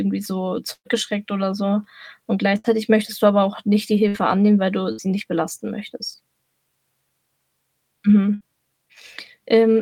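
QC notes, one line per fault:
0.73–0.88 s, burst of packet loss: the sound stretches into a fading held sound for about 115 ms, about 70 ms of it silent, before "oder so"; roughly 120 ms of audio was lost and concealed by extending the last sound.
2.59–2.67 s, burst of packet loss: a brief smeared hold of about 50 ms, then a jump into "möchtest du aber auch"; about 60 ms is missing.
4.08–4.17 s, burst of packet loss: about 60 ms of held, decaying sound covers 60 ms of lost audio.
4.92–5.01 s, burst of packet loss: after "annehmen weil du", a short held tail, then a skip to "nicht belasten möchtest"; about 60 ms is missing.
8.34–8.43 s, burst of packet loss: about 60 ms of fading continuation bridges a 60 ms gap.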